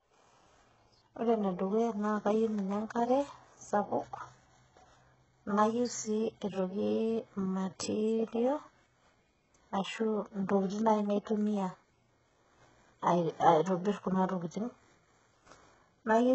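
Across the whole speech recording the treble sounds synthetic rather than recorded, which points most likely to HE-AAC compression at a very low bitrate, consistent with roughly 8 kbps. The codec damage is heavy. Only the lower band is coded directly, and the upper band is rebuilt by copying lower content upward. Nothing extends above 8 kHz. The reconstructed harmonics don't line up with the real ones, so s sounds come out gritty, lispy and metallic.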